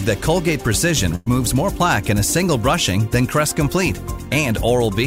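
At 1.15 s there's a burst of packet loss running to about 1.28 s. Roughly 100 ms of audio never arrived, so the receiver stretched the last sound it had and faded it down for about 106 ms, then jumped ahead with that stretch missing.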